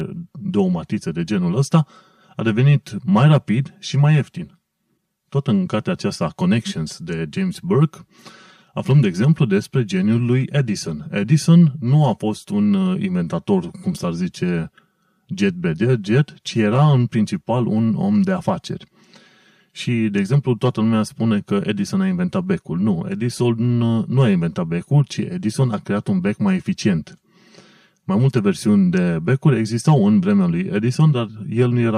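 Throughout the speech, channel delay (comb filtering) is audible: one channel lags the other by about 5 ms, and the mono sum cancels near 100 Hz and every 200 Hz above, giving a hollow, phasey tone. A spectrogram shows fixed, evenly spaced dark horizontal bands.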